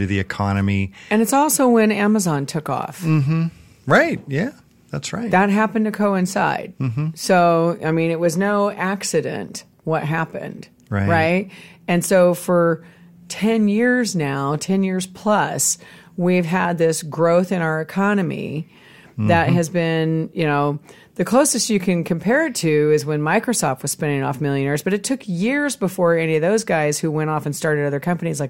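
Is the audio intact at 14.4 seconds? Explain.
Yes, the audio at 14.4 seconds is intact, with no dropout, distortion or other fault at that moment.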